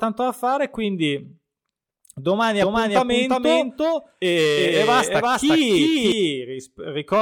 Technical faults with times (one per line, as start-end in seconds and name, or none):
2.62-6.12 doubled audio track